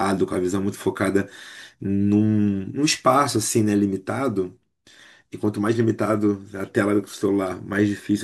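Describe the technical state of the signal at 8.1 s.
At 8.1 s the speech signal is intact, with no technical fault present at that moment.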